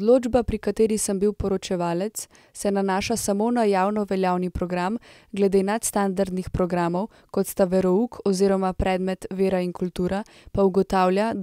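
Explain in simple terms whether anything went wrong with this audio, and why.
Nothing went wrong with this recording.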